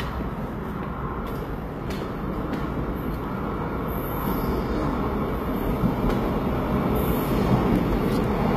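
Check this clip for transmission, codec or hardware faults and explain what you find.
One codec fault runs through the whole clip. HE-AAC compression, throughout: the lower spectrum is coded directly and the treble is synthesised by copying lower bands upward under a coarse envelope. High detail sounds bright but gritty and metallic, stops at 14.8 kHz, and plainly audible damage likely points to a bitrate near 20 kbps.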